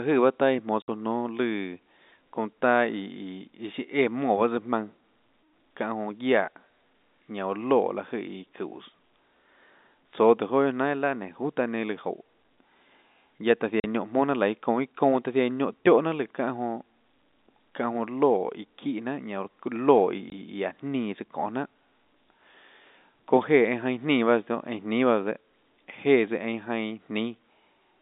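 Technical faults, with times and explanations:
0.82–0.88 s, 13.80–13.84 s and 20.30–20.32 s: packet loss filled with silence. Lost packets were replaced by silence instead of concealed, so the speech drops out abruptly for 60, 40 and 20 ms with hard edges, multiples that point to 20 ms packets.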